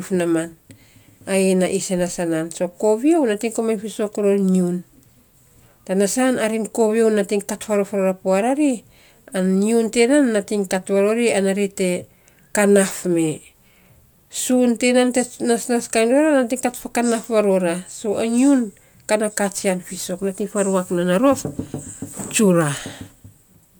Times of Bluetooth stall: none

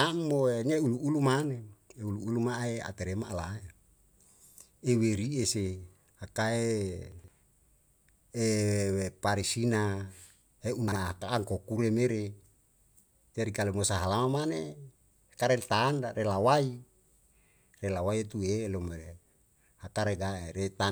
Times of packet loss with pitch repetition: none

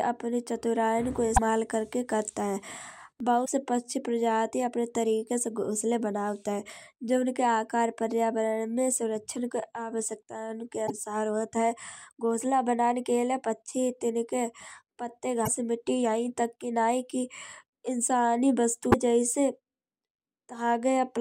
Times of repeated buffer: 3.20

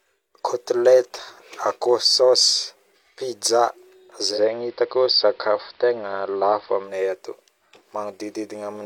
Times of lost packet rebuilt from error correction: none

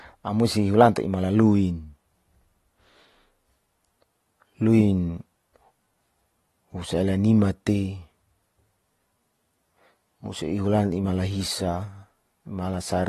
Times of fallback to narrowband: none

